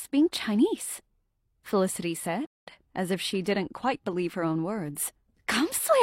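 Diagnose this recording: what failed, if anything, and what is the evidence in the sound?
A rebuffering stall at playback: the sound drops to silence from 2.47 to 2.67 s, showing as a blank spectrogram gap, then resumes exactly where it stopped, adding 0.2 s.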